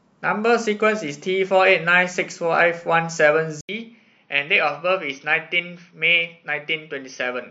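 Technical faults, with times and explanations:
3.61–7.51 s: input switched to a poorer device. An 80 ms silence comes first. The speech then loses everything above 6.2 kHz, turns a little quieter, and gains faint new noise, likely from a device change.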